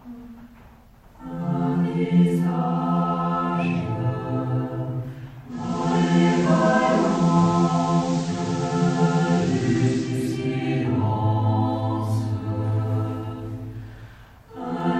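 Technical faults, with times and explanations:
5.47–10.34 s: digital radio blending to analogue. Lost digital reception forces a 477 ms fade to FM and back. Hiss rises, level shifts about 2 dB.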